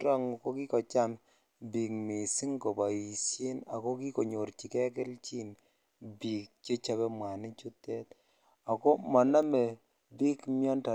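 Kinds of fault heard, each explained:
Bit error spike: a flipped bit kicks three samples way off and back, so you get one sharp broadband tick at 9.43 s, about -36 dBFS.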